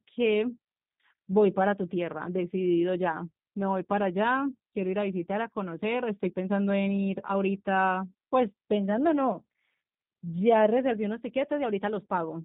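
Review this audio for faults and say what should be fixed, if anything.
A G.729 codec rebuilds the speech throughout from a filter and sparse pulses, removing everything above 4 kHz and leaving a plainly rough, synthetic sound. Route the audio through a wideband codec such as G.722 or Opus, or record it locally before transmission, so it never passes through G.729.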